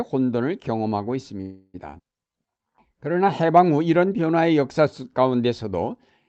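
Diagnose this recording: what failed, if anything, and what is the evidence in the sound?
A call audio freeze at the network and jitter-buffer stage runs from 1.41 to 1.76 s. The speech stops and the last sound is stretched into a fading buzz or hiss for about 325 ms, with no audio lost. A likely cause is packets held up in transit. On a spectrogram this looks like smeared horizontal bands that decay, and on the waveform like a shrinking repeated cycle.

A skip ahead at 1.98 to 2.01 s drops roughly a tenth of a second of speech and joins the two sides almost directly, with a gap of about 11 ms. This is audio dropped in transit or by an overflowing jitter buffer while later audio was already waiting. The waveform shows an abrupt splice, and the spectrogram shows formant tracks that jump without transition.

A jitter buffer slow-down from 2.28 to 3.47 s plays the speech at about 91% speed, adding 118 ms. 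The pitch is unchanged, and vowels sound drawn out. The waveform shows near-identical repeated pitch periods, and the spectrogram shows harmonics that stay level but stretch in time, cut off above 8 kHz by the Opus call codec.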